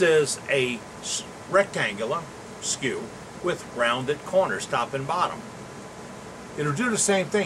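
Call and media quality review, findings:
No audible faults found; nothing to escalate.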